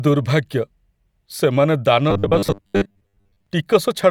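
A speech clip with robotic sound from repeated short buffers between 2.11 and 3.47 s. The speech becomes a rigid metallic buzz at 100 Hz. Most of that stretch is repeated audio. The likely cause is late-arriving audio patched by looping 10 ms chunks.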